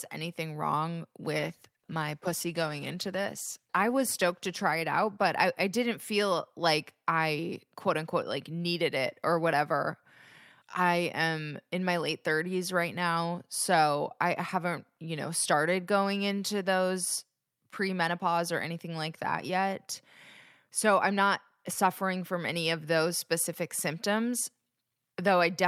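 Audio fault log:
1.37–7.77 s, call bitrate drop: After "anything wrong", the speech turns coarse and rough, which fits the encoder dropping from about 64 to 17 kbps. Fewer bits force cruder coding. The worst stretch lasts about 2.8 s. Quality recovers before "quote unquote like needed".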